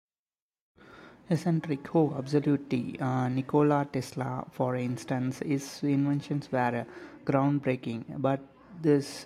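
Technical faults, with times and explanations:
Nothing here to flag: no technical faults turn up anywhere in this speech recording.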